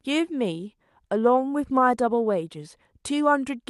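No technical faults detected.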